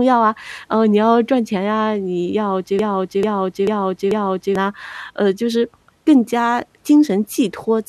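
A speech clip with a broken-record loop from 2.79 s to 4.55 s. A fragment about 0.44 s long plays exactly, back to back, four times in a row. Each repeat is identical, so the sound stutters rather than continuing. Whatever should have been heard across those 1.76 seconds is missing. The likely cause is a stall in the player, encoder or stream, which kept resending the last fragment it held until fresh audio arrived.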